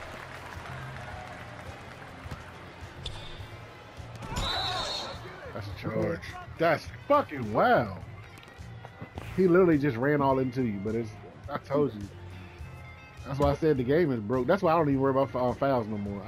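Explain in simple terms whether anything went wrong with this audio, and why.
Listening closely, nothing in this audio stood out as having gone wrong.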